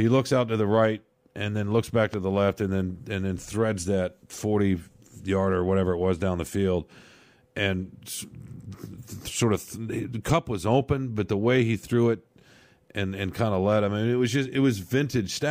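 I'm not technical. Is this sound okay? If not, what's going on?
No. Something in the recording chain most likely got a sudden electrical jolt, such as a cable being bumped, a switch flicking, or a burst of static. That jolt lands on top of the speech as a single loud pop, from about 2.14 to 2.16 s, just after "and then looks back" and before "the left and then". The pop is much louder than the voice, but the speech carries on underneath it uninterrupted.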